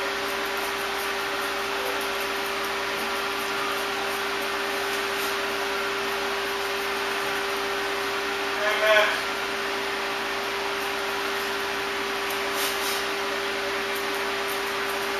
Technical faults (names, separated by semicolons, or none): none